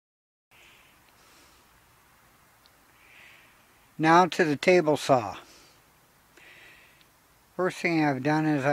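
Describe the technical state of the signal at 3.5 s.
At 3.5 s the signal is intact, with no audible fault at that point.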